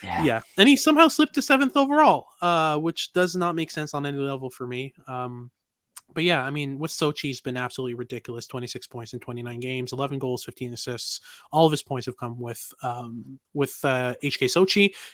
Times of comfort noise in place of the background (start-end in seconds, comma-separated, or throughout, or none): none